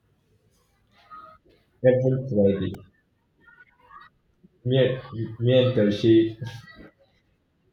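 At 2.74 s the speech has a repeated buffer. Fresh audio arrived late, so the same tiny slice, about 1.3 ms long (which fits a 64-sample buffer), played back to back, apparently four extra times, with a hard join at each repeat. It replaces a few milliseconds of audio. So small a slice is heard as a brief click or buzz. A waveform shows a short run of identical periodic cycles with abrupt edges, and a spectrogram shows a thin vertical broadband stripe.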